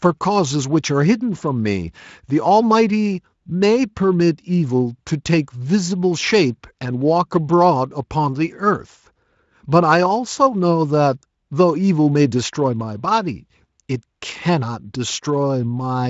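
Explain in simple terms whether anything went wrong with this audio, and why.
Nothing went wrong with this audio; the speech comes through the Speex codec with no problem that can be heard.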